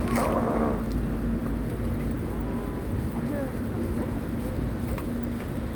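No technical faults are audible.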